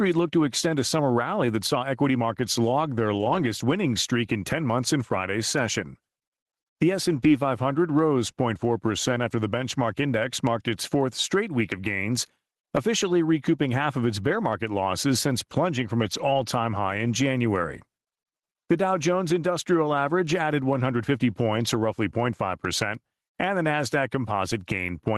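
Gain pumping runs through the whole clip. The level swells in the pauses and ducks under each loud syllable, swinging by about 15 dB. Loud and soft passages sit close together, and the speech sounds squashed. The likely cause is input gain set far too high, with a fast limiter or compressor clamping down on every peak.

A lost packet rebuilt from error correction first appears from 3.13 to 3.43 s, between "equity markets log their" and "winning streak in". There is no gap. Instead the speech turns rougher and noisier. The next event runs from 7.11 to 7.25 s, and the last from 16.01 to 16.43 s, between "losses since plunging from" and "high in". In each case packets were dropped, and the following packets carried low-bitrate copies that the decoder played in their place. Those copies are cruder than the normal stream, which is why the sound degrades without breaking up. The call codec itself is audible as a top end that stops near 12 kHz. 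That fits Opus at around 24 kbps.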